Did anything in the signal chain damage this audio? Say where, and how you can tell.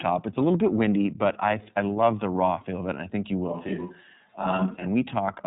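Yes. iLBC codec throughout, at the codec stage: nothing passes above 3.8 kHz, and the speech sounds plainly rough and synthetic, which fits iLBC at 13.33 kbps with 30 ms frames.

Switch to a distant microphone, 3.51 to 4.84 s, at capture: the sound turns abruptly roomy and hollow with thinner bass, at similar level, with room noise around 35 dB below. A failed close microphone is the likely cause.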